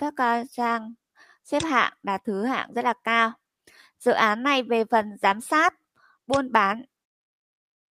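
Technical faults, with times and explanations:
1.16 to 1.36 s and 5.96 to 6.16 s, sound cut by the noise suppressor. In each window the level sinks, by about 10 dB in the first and about 15 dB in the second, and the dip lasts about 150 ms in the first window and about 200 ms in the second. The suppressor mistakes this stretch for background noise and pulls its gain down. Sustained parts thin out and their decays end early. Sudden onsets still come through.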